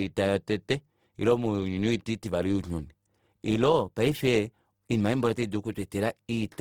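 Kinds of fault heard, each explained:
Opus compression: likely Opus music-mode coding at a rate fitting 16 kbps ran short of bits, so the full-band speech turns plainly grainy, rough and noisy.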